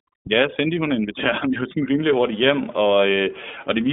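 From the start to 2.0 s, just before "hurtigt hjem", overdone noise removal is at work. The suppressor has been pushed too hard against the room noise, which sits about 26 dB below the speech. Individual frequency bands that fall near the noise estimate are driven down or switched off. The background drops and breaks up into twinkling specks, and quieter parts of the speech are removed with it.

Across the whole clip, the iLBC codec narrows the line to roughly 200 Hz to 3.6 kHz, so nothing above that reaches the listener. The codec damage is plainly audible. Each 30 ms frame has its excitation coded on its own, without reference to the frame before, at a rate that fits the 13.33 kbps mode. The result is speech that stays intelligible but sounds rough and somewhat synthetic throughout.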